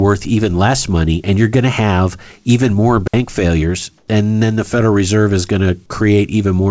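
A speech recording with two short faults. At 3.08 s the audio drops into a clean, near-silent hole lasting 60 ms, with no click or noise burst at either edge. This is a digital wireless dropout: the radio link lost too much data, so the receiver briefly muted with a very fast fade. From 3.98 to 4.08 s, a pause where the background sits about 41 dB below the loudest sound turns into a smooth, featureless hiss for 100 ms, about 4 dB quieter than the real room sound it covers. The likely cause is comfort noise in place of the background, with the sender halting transmission during the gap (discontinuous transmission) and the receiver filling it with synthetic noise of roughly matching shape. Throughout, nothing is heard above 8 kHz, which points to the G.722 codec at 64 kbps on the call path.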